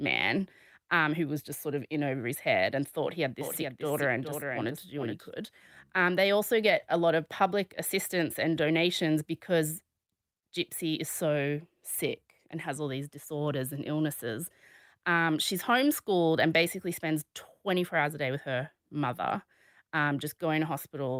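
A doubled audio track runs from 3.41 to 5.29 s in this speech recording: a second, full-band copy of the same sound trails the original by roughly 400 ms, sitting about 5 dB quieter. It carries no decay or room colour, so it reads as a duplicate rather than an echo, and it cuts in and out abruptly at those times. The likely cause is the signal being captured twice, once through a slower path, or an edit leaving two copies out of step.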